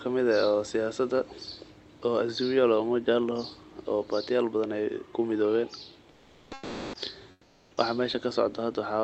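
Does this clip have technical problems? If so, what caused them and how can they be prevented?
Yes. Comfort noise in place of the background appears from 6.11 to 6.93 s and from 7.31 to 7.77 s. In these pauses the real room background gives way to a smooth, featureless hiss, about 12 dB louder in the first gap and about 8 dB quieter in the second. The likely cause is Opus discontinuous transmission: the sender stopped sending audio during silence, and the receiver filled the gap with synthetic noise. Turning off DTX on the sending side would keep the genuine background throughout.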